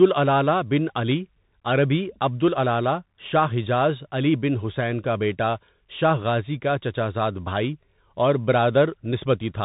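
Bluetooth CVSD headset codec throughout this speech: its narrowband filtering removes everything above 3.8 kHz, and its one-bit delta coding roughens s sounds and leaves a granular hiss underneath.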